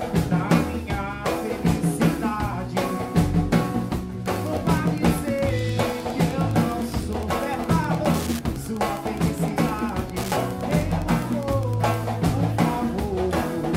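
From 4.16 s to 12.01 s a steady, fine ticking sits under the sound, about ten clicks a second, roughly 20 dB below the main signal. This is Wi-Fi interference. A nearby Wi-Fi radio's beacon, repeating every 102.4 ms, is being picked up by the audio circuitry and rectified into audible pulses, so each transmission becomes a small click locked to that regular interval for the whole stretch.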